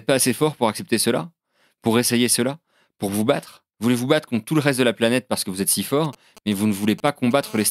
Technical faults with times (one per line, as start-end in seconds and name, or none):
6.04-7.33 GSM signalling bursts
7.43-7.66 GSM phone buzz